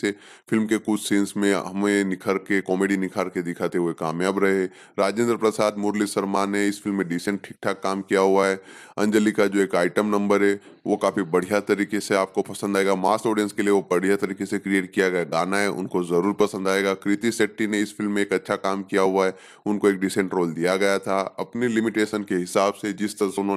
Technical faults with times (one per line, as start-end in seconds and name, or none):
none